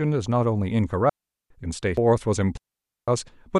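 At 1.09 s the speech falls into a digital wireless dropout lasting 0.41 s: the receiver lost too much data and muted behind a very short fade, leaving a clean hole of near silence with no noise burst either side. At 1.97 s a CD skip follows, where the laser jumped to another turn of the disc spiral. A brief mute of only a few milliseconds occurs, and the sound resumes from a different point rather than simply going silent. A second wireless dropout runs from 2.57 to 3.08 s, a clean 0.51 s gap that has no tick and, unlike the skip, no jump in position.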